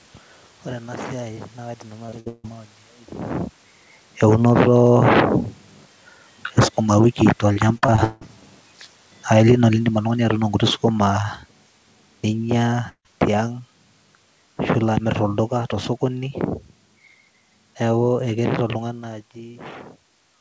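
Right after "na kaidim nanu", from 2.06 to 2.46 s, the speech turns choppy, breaking up in four quick holes. This is repeated packet loss with a robotic sound. Audio packets kept failing to arrive in time, and each time the receiver filled the hole by stretching out the last sound it had. About two thirds of that stretch is patched rather than real, and the longest hole is 158 ms.

From 2.92 to 5.16 s the level sinks by about 4 dB, with the room background sinking along with it. This is automatic gain falling: the gain control judged the input too loud or its background too strong and eased its gain down over a couple of seconds. Almost immediately, from 5.10 to 5.49 s, it swings back up by about 4 dB, and speech and background swell together. That is automatic gain rising, where the control judged the level too quiet and pushed the gain back up.

Just after "e sukuma wiki", from 7.54 to 8.23 s, the same robotic breakup returns with five holes. 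The longest is 175 ms, and a little under 40% of the span is concealed, so it sounds choppy.

From 9.17 to 13.65 s the audio fades gradually by about 7 dB as automatic gain falling lowers the level again. Late in that fade, from 12.89 to 13.07 s, there is a brief tail of buzz that dies to about 90 ms of near silence before the sound resumes, with a short piece missing. This is likely a long network dropout, where nothing arrived and the concealment faded out before real audio came back.

The call codec cuts everything above 8 kHz, which fits 64 kbps G.722.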